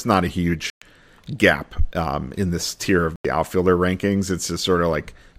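From the start, a faint roughness rides on the speech. It is sample clock jitter. The converter's clock wobbles by around a microsecond, so each sample lands slightly off time. Steep, fast-changing parts of the waveform suffer most. The result is a grainy hiss roughly 40 dB below the speech. It grows on loud, bright sounds. It disappears in the pauses, because a silent signal has no slope to misread.

At 0.70 s the sound cuts out. It returns at 0.82 s, after a gap of about 116 ms. A second hole opens at 3.16 s and closes at 3.25 s, about 87 ms. Both are likely Bluetooth dropouts. Wireless packets arrived too late and were discarded, so nothing played. The first gap fits about eight lost packets, the second about six. Speech resumes further along, as if it had kept running.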